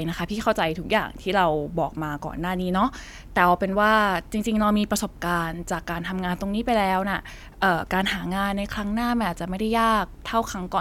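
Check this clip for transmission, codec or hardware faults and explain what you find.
No transmission, codec or hardware faults are audible here.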